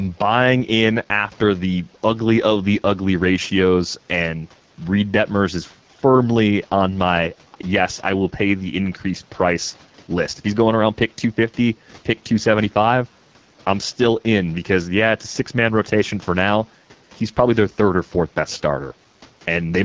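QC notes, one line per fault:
Throughout: AMR wideband (HD Voice) codec. Rough, raspy speech fits a low rate near 8.85 kbit/s. Spectrogram shows harmonic detail ending near 6.4 kHz, with a diffuse noise band to 7 kHz.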